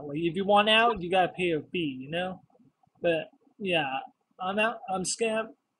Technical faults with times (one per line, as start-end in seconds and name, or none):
0.87-0.98 corrupt frame decoded
4.88-4.91 corrupt frame decoded